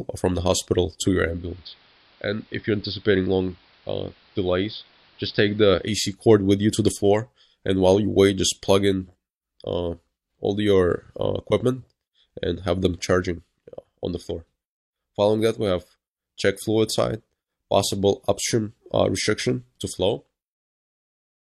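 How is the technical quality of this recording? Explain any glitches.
There's one clear glitch. From 1.12 to 6.23 s, digital radio blending to analogue: the receiver lost digital and cross-faded over 447 ms to AM, so the sound drops about 3 dB, goes dull, and picks up hiss roughly 30 dB down.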